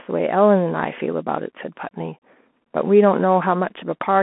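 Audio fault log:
Throughout: Bluetooth CVSD headset codec. The speech is held to a telephone band of roughly 200 Hz to 3.4 kHz with nothing above 3.8 kHz, and it carries a granular hiss. S sounds turn scratchy, and loud high sounds distort where the one-bit up-or-down step, which fits a 64 kbps stream, cannot keep pace. That slope distortion and grain set it apart from a plain band-limit.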